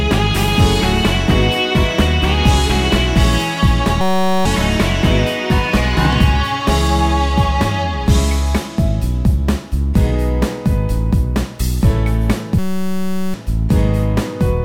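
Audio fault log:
4.01–4.45 s and 12.59–13.34 s, system hang loop: The playback system froze. The sound hardware kept replaying the same tiny slice of its ring buffer. That slice is 5.33 ms long, which fits a 256-sample buffer. Repeating so fast, it fuses into a steady buzz at 188 Hz instead of a stutter. The real audio stops during each hang. About 0.4 s is lost in the first and about 0.7 s in the second.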